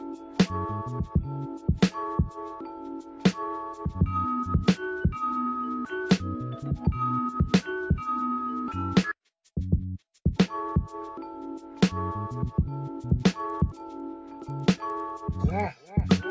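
From 13.0 s to the end at 16.30 s, the resampler restarted on every block: each 100 ms block was converted separately, likely from 44.1 kHz to 16 kHz, leaving an error at every edge. This produces regular ticks at 10 Hz, present only with signal, visible as evenly spaced thin vertical lines on a spectrogram and small waveform discontinuities.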